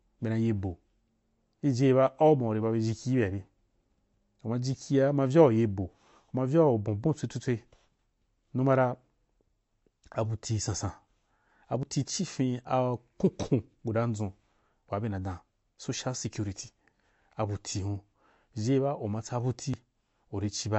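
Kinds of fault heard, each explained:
MP3 compression: The encoder was likely short of bits and threw away detail its hearing model judged unimportant, which fits a low bitrate near 42 kbps. Nothing above 8 kHz survives, so the speech sounds dull. The damage is plainly audible throughout: weak frequency lines flicker on and off between frames, giving a watery, swirling texture, with metallic chirps on sibilants and softened consonant attacks.
Audio missing between chunks: The recorder or processor likely handled the audio in 4-second blocks and dropped a brief slice, roughly a twentieth of a second, at some block boundaries. The surrounding audio is butted together with no gap. A skip lands at 11.83 s, just before "tii ci fin a", and another at 19.74 s, right after "ma tsabu". Each one jumps abruptly and clips a fragment of sound.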